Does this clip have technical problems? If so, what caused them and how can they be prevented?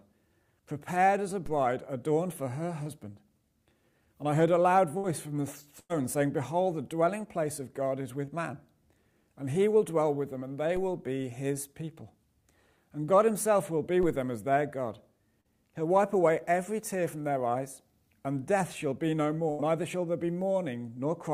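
Yes. A DC step occurs at 1.46 s, where the waveform's zero line jumps to an offset that holds until 10.77 s and then goes away, and again at 14.03 s, where it stays shifted through the end of the clip. Each jump is a low thump while the sound continues unchanged. A high-pass or DC-blocking filter after the converter, and avoiding live input switching or recalibration mid-recording, would prevent these steps.

Short concealed packet loss appears at 2.83 s, 8.25 s and 15.41 s, with gaps of about 20 ms, 20 ms and 40 ms. Each time, packets arrived too late, and the decoder bridged the hole by extending the preceding sound before blending back in, leaving a brief smear or wobble. A larger jitter buffer, or forward error correction on the stream, would prevent these.

A burst of packet loss occurs at 4.97 s, 5.80 s and 19.50 s, losing about 60 ms, 100 ms and 80 ms. In each burst, consecutive packets were lost or arrived too late, so the receiver stretched the last sound and faded it into a held buzz or hiss, and that stretch of audio is gone when playback resumes. 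A more stable network path, with redundancy or FEC spread across packets, would prevent these bursts.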